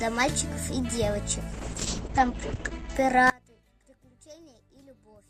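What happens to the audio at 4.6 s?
At 4.6 s the sound has collapsed to a faint remnant, about 29 dB quieter, a state that begins at 3.30 s and lasts to the end of the clip. The likely cause is one channel inverted: with one stereo side in reversed polarity, everything common to both cancels when summed to mono, leaving only their small difference. Unlike a dropout or a mute, the sound doesn't vanish. A faint residue persists, with the centre gone.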